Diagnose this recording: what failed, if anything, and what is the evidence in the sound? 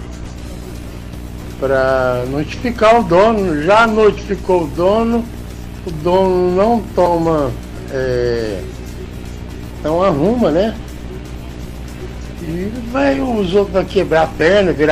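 Nothing stood out on listening, and no stage of the chain left any audible trace of trouble.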